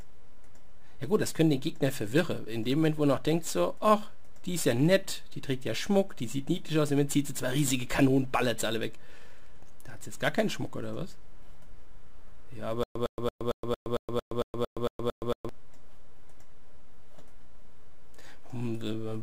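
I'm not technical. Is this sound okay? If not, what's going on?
No. From 12.83 to 15.49 s there is a stutter with silent gaps. A short 107 ms burst of sound repeats 11 times, each followed by about 120 ms of dead silence. This is most likely a player or stream that stalled and kept replaying its last fragment, and the audio meant for that stretch is missing.

Throughout the clip there is also a DC offset. The entire waveform sits off its centre line. You can't hear it directly, but it wastes some of the available loudness range and puts a constant, inaudible push at the very bottom of the frequency range.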